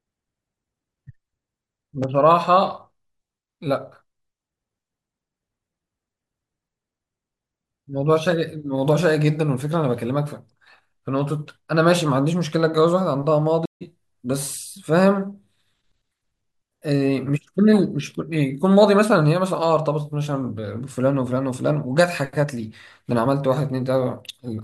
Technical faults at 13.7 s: stream reconnect

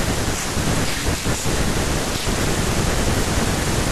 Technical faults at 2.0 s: buffer tearing

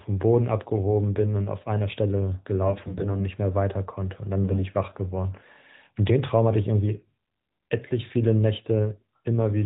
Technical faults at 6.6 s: none

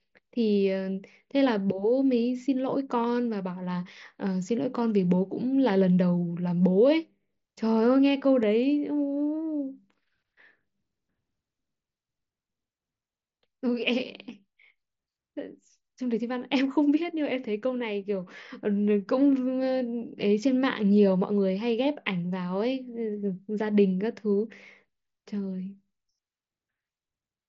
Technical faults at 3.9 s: none

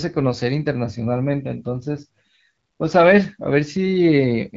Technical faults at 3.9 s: none

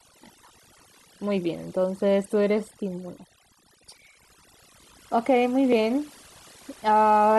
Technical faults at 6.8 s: overdone noise removal

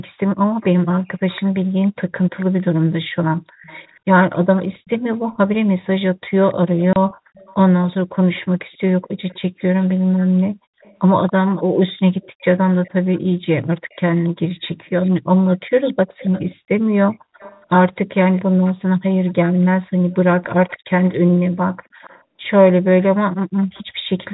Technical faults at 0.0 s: none

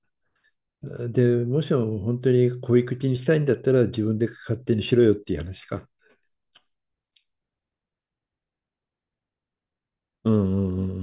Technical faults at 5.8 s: none

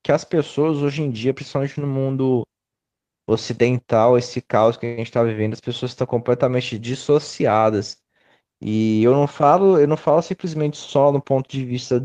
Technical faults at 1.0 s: none

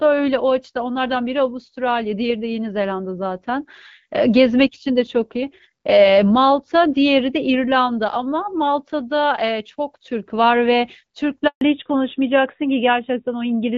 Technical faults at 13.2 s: fallback to narrowband

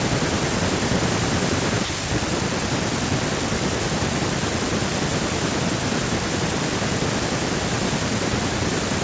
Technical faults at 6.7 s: none

